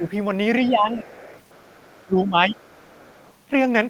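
Speech suppressed in double talk at 0.00–0.06 s and 0.67–1.07 s: the talker's level dips by about 10 dB in short patches. The likely cause is an echo canceller that, with both sides talking, couldn't separate the talker from loudspeaker echo and turned everything down.

Other side's voice leaking through from 1.05 to 2.05 s: a faint second voice, roughly 25 dB below the talker, sits under the speech. This is likely loudspeaker playback that the echo canceller failed to fully remove from the microphone.

Speech suppressed in double talk again at 2.05–2.58 s, dipping deeper, about 15 dB, across much of that stretch. It is likely the same canceller clamping down while both sides overlap.

Other side's voice leaking through at 2.57–3.33 s, fainter this time at roughly 35 dB below the talker. It is likely residual echo left in the microphone signal.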